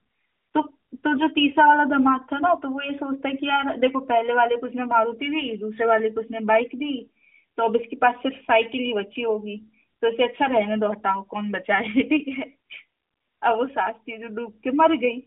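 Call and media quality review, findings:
No faults found in the speech. The AMR narrowband mobile codec path at 12.2 kbps is audible as a 200 Hz to 3.6 kHz telephone band with nothing above 3.8 kHz, and its coding leaves only a light synthetic edge.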